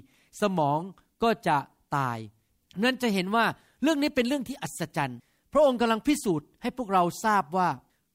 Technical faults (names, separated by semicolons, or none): none